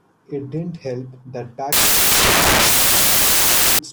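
From 1.73 to 3.79 s, the speech turns to loud, harsh broadband noise. The samples are built from the wrong bytes, so the low bits dominate each value.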